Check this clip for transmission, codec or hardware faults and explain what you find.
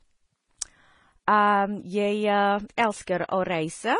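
There is one codec fault, present throughout the speech: the sound of transcoding between lossy codecs. Nothing is audible above 10.5 kHz, and two distinct sets of coding artefacts sit on top of each other. The likely cause is a low-bitrate Vorbis encode re-encoded as AAC-LC at a similar low rate. The second encoder wastes bits reproducing the first one's smearing and adds its own, so the artefacts of both codecs are heard together.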